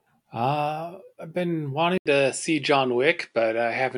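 At 1.98 s, just after "I've been", the input likely switched to a poorer device with a narrower band. An 80 ms silence marks the changeover. The speech then loses everything above 10.4 kHz and sounds duller at the same level, over faint new background noise.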